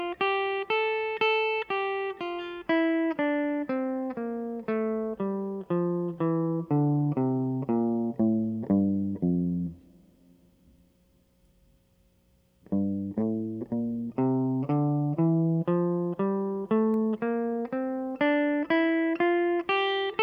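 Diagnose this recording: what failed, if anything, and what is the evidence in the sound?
An electrical switching spike, likely from a nearby switch, motor or static discharge arcing onto the analogue wiring, intrudes at 16.94 s. It sounds as a single sharp snap over the music, peaking around -30 dBFS and lasting only an instant.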